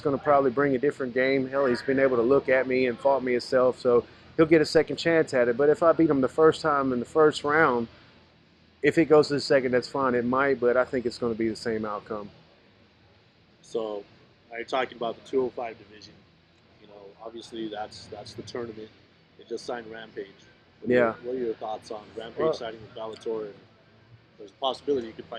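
The audio carries a single DC step at 4.77 s, where the waveform's zero line abruptly shifts by about -33 dBFS. The jump registers as a brief low thump or click, while the sound itself continues unchanged through it. The offset does not hold. It drains away along the curve of a 5 Hz high-pass, the way a coupling stage settles after a converter recalibrates or an input carrying an offset is switched into the path.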